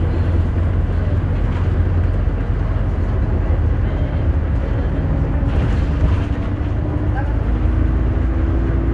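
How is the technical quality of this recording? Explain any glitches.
The recording is technically sound, with no glitches or defects anywhere in the audio.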